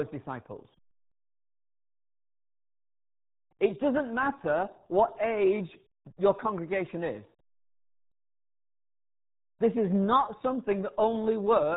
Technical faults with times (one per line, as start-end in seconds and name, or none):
0.00-11.76 RealAudio 14.4 codec